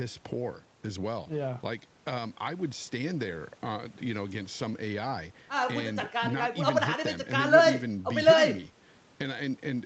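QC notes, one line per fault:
Nothing stood out on listening to this speech clip, which carries the expected call-path sound with content reaching up to about 8 kHz.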